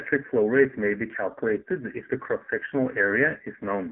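Throughout, the AMR narrowband mobile codec squeezed the speech hard, fitting a rate near 5.9 kbps. Nothing above 3.8 kHz survives, leaving it buzzy and synthetic.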